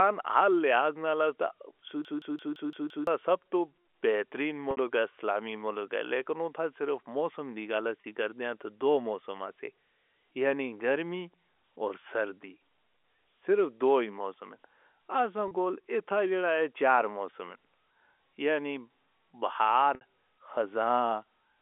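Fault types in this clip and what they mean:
System hang loop: from 2.05 to 3.07 s the system froze and the hardware replayed one 171 ms chunk six times, a machine-gun stutter at 5.86 Hz.
Packet loss with pitch repetition: at 4.71 s after "تو بہترین", plus 8.01, 15.48 and 19.95 s, 30 or 60 ms gaps are bridged by repeating the last pitch period, heard as brief buzzy holds, the 60 ms ones fading into silence before the speech returns.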